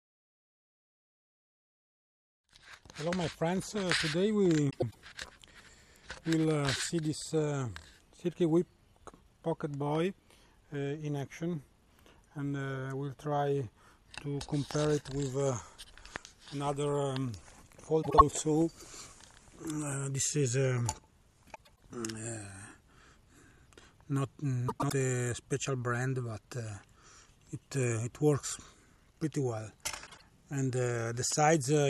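The audio has two kinds of fault. Frames out of order occur at 4.70–4.96 s, 18.02–18.21 s, 21.55–21.80 s, 24.68–24.92 s and 30.06–30.22 s. In each, two adjacent blocks of decoded audio swap places, about 104.5 ms apart in the 4.70, 21.55 and 24.68 s cases, 78.4 ms at 18.02 s and 52.2 ms at 30.06 s. The spans fit groups of two to four codec frames. Each sounds like a brief garbled flutter. On a spectrogram, the harmonic traces jump backwards and then forwards again, with thin vertical lines at the three seams. The waveform's envelope steps abruptly at the same points. No time goes missing.

A loud pop appears at 14.71–14.73 s, 16.16–16.18 s and 31.32–31.34 s. Each is a single sharp impulse, roughly 15 dB above the surrounding signal for the first two and about 10 dB for the last, with the audio carrying on beneath it. The likely cause is an electrical transient such as a plug, switch or static discharge. 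In the waveform, each pop is a tall, narrow spike. On the spectrogram, it is a bright full-height vertical stripe about 20 ms wide.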